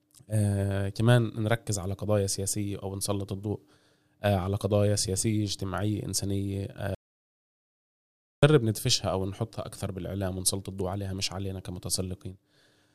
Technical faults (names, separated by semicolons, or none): audio dropout to silence